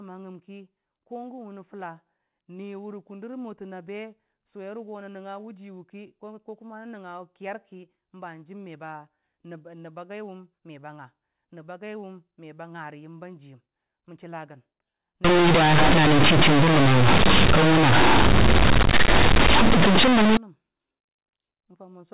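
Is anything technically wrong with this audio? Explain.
Yes. Companded audio read as linear, from 15.2 s to 20.4 s: mu-law bytes are played as plain 8-bit samples with no expansion. Every sign change swings across roughly half the range, flattening quiet and loud alike, so the speech turns into loud, buzzy distortion with heavy noise in pauses. Around it, the normal G.711 telephone coding is heard as a 4 kHz band limit.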